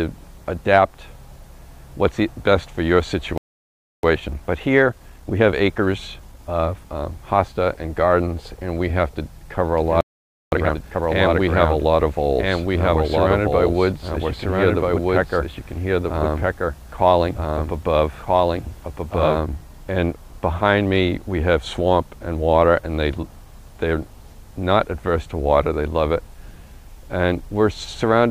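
At 3.38 s the player likely ran out of data or had its thread blocked, causing a playback stall: the sound cuts off mid-flow and stays silent for 0.66 s until 4.03 s. From 4.03 s to 7.03 s a time-compressed catch-up trims the backlog by cutting and cross-fading short slices, so the audio runs 1.15 times fast at unchanged pitch.

From 9.78 s to 19.38 s a doubled audio track appears, likely a second, slower capture path mixing the same material back in. A full-band copy trails about one and a half seconds behind at roughly equal loudness, dry and without room colour, starting and stopping abruptly.

Inside that stretch, a second playback stall likely stems from the same starvation, silencing output from 10.01 s to 10.52 s (0.51 s). The catch-up that follows is harsher: from 10.52 s to 11.02 s the audio is squeezed to double speed, still at normal pitch, sounding rushed.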